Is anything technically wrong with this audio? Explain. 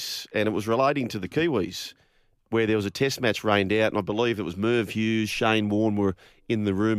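No, nothing technically wrong can be heard here.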